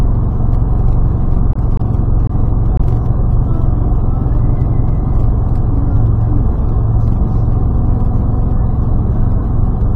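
Short concealed packet loss at 1.53, 1.77, 2.27 and 2.77 s: each 20 ms hole is filled by extending the preceding sound, giving a brief smear rather than a silent dropout.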